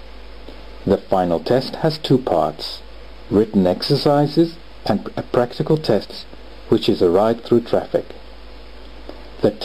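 Around 6.03 to 6.24 s there's a stretch of frames out of order: two neighbouring runs got swapped and decoded that way, so the halves play back exchanged, which fits two frames per run. It comes across as a garbled flutter, and no time goes missing.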